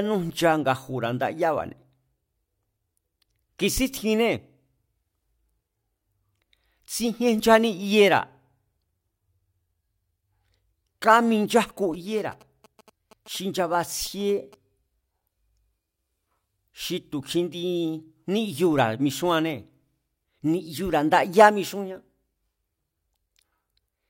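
From 11.94 s to 14.55 s the speech picks up GSM signalling bursts: a nearby 2G phone exchanging short groups of radio bursts with its network, which the audio circuitry rectifies into sound. It comes through as a galloping dit-dit-dit of brief buzzes at a 217 Hz repetition rate, well below the speech. A spectrogram shows evenly spaced harmonics of 217 Hz in separated clusters, and the waveform shows repeated bands of spiky pulses.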